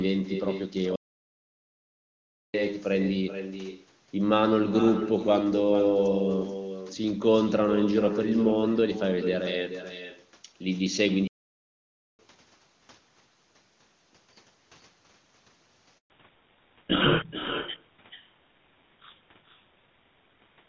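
Every phrase of the speech is trailed by a fainter, thinner copy, roughly 400 ms behind and about 9 dB down, all the way through. That is echo with no canceller: the far end is playing the call over a loudspeaker, its microphone captures that playback, and nothing subtracts it, so the talker's own voice returns after the network round trip.

At 0.96 s the sound halts mid-flow and stays silent for about 1.58 s, resuming at 2.54 s. A second halt runs from 11.27 s to 12.19 s, roughly 0.91 s. Both are playback stalls. The output simply stops rather than fading. The likely cause is the player running dry of buffered data or its audio thread being blocked, with output restarting only once it recovered.

At 15.98 s the voice dies away within a few tens of milliseconds and drops to silence for 120 ms until 16.10 s. This is a handover gap: the call was being moved from one network to another, no speech frames arrived during the switch, and whatever was said in that window is gone rather than delayed.

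From 16.10 s to the end, the speech turns noticeably duller and rougher, with nothing above 4 kHz. This is a fallback to narrowband. The call drops out of HD Voice, which fits a switch from AMR-WB at its top rate to GSM full rate. The new codec cannot carry the upper band, so sibilants and breath lose their crispness.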